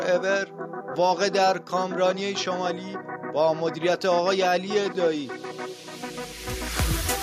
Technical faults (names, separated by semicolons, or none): none